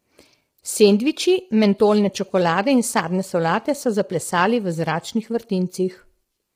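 Throughout, the speech sounds rough and grainy, with noise between the harmonics, pointing to heavy damage from low-delay AAC compression, likely AAC-ELD at roughly 24 kbps.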